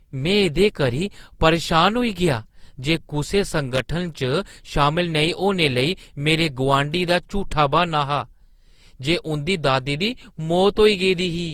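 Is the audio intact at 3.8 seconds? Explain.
No. From 3.73 to 3.81 s, a worn or dirty contact in the signal path opens and closes rapidly, chopping the audio into an irregular burst of loose connector crackle and scratching. Underneath, the speech sounds swirly, smeared and hollow, with blurred attacks. This is likely generation loss from Opus re-encoded around four times at about 48 kbit/s.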